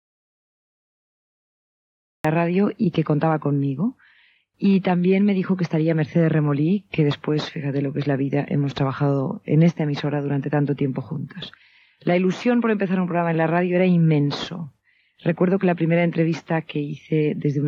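The clip opens in an audio dropout to silence that is already under way at the start and lasts until about 2.25 s, when the sound enters abruptly in mid-flow. For that whole stretch the signal is silent, with no room tone or noise floor at all. That points to the input likely having been lost, through a disconnected device, a failed link or a mute, while the recorder kept writing empty samples. Whatever occurred in those first seconds is not recoverable.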